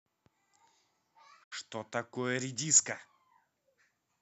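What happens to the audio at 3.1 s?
Nothing goes wrong at 3.1 s; the speech carries on intact through that moment, with no dropout, click or distortion to be heard.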